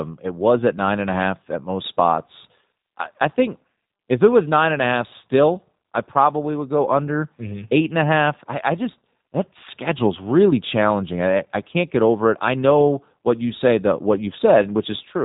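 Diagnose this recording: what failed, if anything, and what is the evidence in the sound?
Codec stage: G.729 coding throughout. Nothing passes above 3.8 kHz, and the speech carries a plainly rough, synthetic grain, which fits an 8 kbit/s stream rebuilt from a vocal tract model and sparse pulses. Simple band-limiting would dull the sound without that grain.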